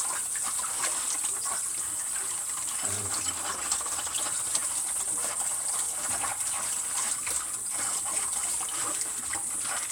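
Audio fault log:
No fault heard in this recording of sounds.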